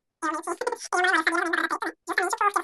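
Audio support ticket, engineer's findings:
Speech chipmunk-high and rushed, whole clip. Pitch up about 19 semitones, tempo tripled. Wrong sample rate at playback stage: no conversion, so pitch and speed rise together by a 3.0 ratio, which fits 16 kHz audio played out at 48 kHz.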